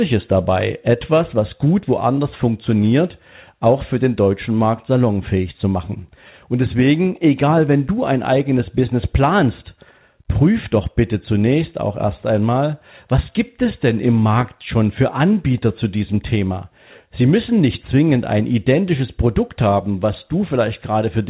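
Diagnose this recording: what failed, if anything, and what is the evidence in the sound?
Nothing in this speech recording has failed: it carries the narrowband character of a call path, with no content above 4 kHz, which fits G.711 mu-law coding, and the signal stays continuous and intact throughout.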